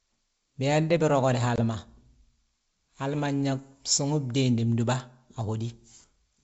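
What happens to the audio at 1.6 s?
Packet loss on an ADPCM call hits at 1.56 to 1.59 s: about 20 ms of audio, roughly one packet's worth, drops out and is filled with silence, leaving a hard-edged hole in the speech. Because the G.722 decoder's adaptive predictor and step size keep running without the missing data, they no longer match the sender's when audio resumes. The speech comes back slightly distorted, settling within some tens of milliseconds.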